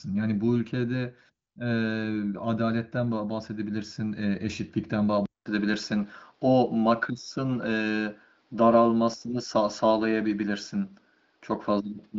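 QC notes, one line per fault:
5.26 to 12.18 s, input switched to a poorer device: after a 200 ms silence the sound turns duller, with nothing above 6.1 kHz where the AMR-WB path had carried up to 7.7 kHz, and a faint new noise floor at an unchanged level. This likely comes from capture moving to a narrower-band microphone.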